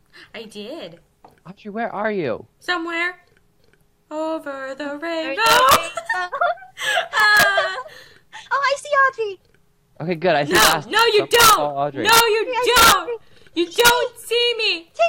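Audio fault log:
5.46–5.76 s, 7.20–7.43 s, 10.55–11.53 s, 12.09–12.20 s, 12.76–12.92 s and 13.80–13.90 s, integer overflow: on each of these loud stretches the signal pokes only about 1 dB past the integer ceiling (about 0 dB at 7.2 s), but instead of being held at the limit it wraps round to the opposite extreme. That full-scale jump is why you get violent cracks rather than the softer fuzz of clipping, even with so little overdrive.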